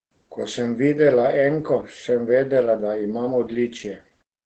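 Opus voice compression affects the whole speech clip, from start to finish. The sound points to the SILK linear-prediction mode at a low bitrate around 12 kbps, with a wideband setting and a frame rhythm that fits 20 ms frames. At this rate the excitation is coded coarsely, so the damage is plainly audible: the voice comes out muffled, hoarse and slightly robotic. There is no content above 16.4 kHz.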